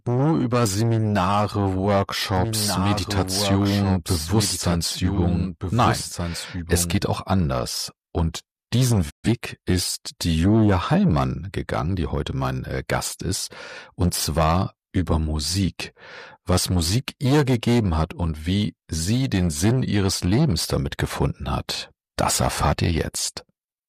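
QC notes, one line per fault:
2.37–6.95 s, doubled audio track. A second full-band copy of the sound runs about one and a half seconds behind the original, a few dB quieter. It has no decay and no room colour, so it is heard as a clean repeat, not an echo. It starts and stops abruptly at the edges of this span. The likely cause is a second capture through a slower path, or an edit that left two copies out of step.
9.09–9.29 s, digital broadcast dropout. The sound fades out over about 20 ms and goes silent, then returns. About 128 ms of programme is missing, which fits three lost frames. The receiver lost the digital signal or rejected corrupted frames and muted until good frames arrived. The missing audio was not buffered or resent, so playback resumes further along and nothing from the gap is recovered.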